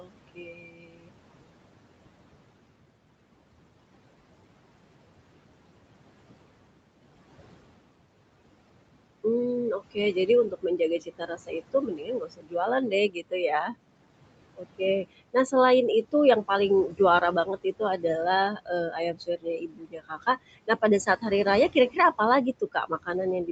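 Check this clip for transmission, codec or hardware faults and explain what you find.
Two faults stand out, both from the noise suppressor in this speech call. The room noise and the call path, which stops near 8 kHz, are not faults.

Noise suppressor artifacts run through the whole clip. The suppressor judges each frequency band, frame by frame, and pulls down anything that looks like steady noise. Here it cuts the background by about 21 dB. The noise sinks in the pauses and comes back up under the speech.

Speech cut by the noise suppressor happens three times. The first is from 0.0 to 1.14 s, with about a second of speech affected. The second is from 9.79 to 13.75 s, with roughly one and a half seconds affected. The third runs from 14.57 s to the end. The suppressor mistakes quiet parts of the speech for noise and turns them down with the background. The deepest drops are about 22 dB. 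Soft consonants and word endings sound swallowed or faint.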